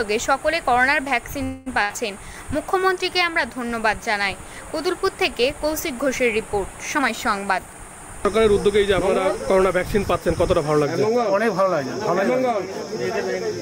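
At 1.43 s the sound stalls for about 228 ms, until 1.68 s. The last sound is held as a buzz or hiss that fades away, and then the audio picks up exactly where it stopped, with nothing skipped. This is a call audio freeze, likely caused by packets held up in transit that left the jitter buffer empty. On a spectrogram the final frame's harmonics stretch out as smeared horizontal bands that thin toward the end. The waveform shows a decaying repetitive stretch with no discontinuity on resumption.

Shortly after, from 1.82 to 1.93 s, there is a burst of packet loss. The receiver fills 72 ms by extending the preceding sound and turning it down, but here the audio resumes further along, with about 80 ms of material gone. It is heard as a brief fading buzz or hiss followed by a jump. The spectrogram shows a short smeared, dimming patch and then an abrupt change in content. The waveform shows a tapering envelope and a step where playback rejoins.

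From 6.96 to 8.95 s a jitter buffer speed-up runs the audio at about 111% speed. The receiver repeatedly cuts out pitch-period-sized pieces to shrink an overfull buffer, removing roughly a fifth of a second in total. Pitch stays the same but timing feels hurried. On a spectrogram the events crowd closer together while the harmonic spacing is unchanged. The waveform looks compressed in time, with tiny splice points between periods.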